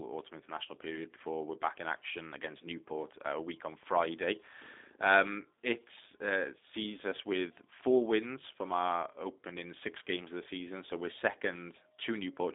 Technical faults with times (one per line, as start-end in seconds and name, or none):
0.00-12.54 G.729 codec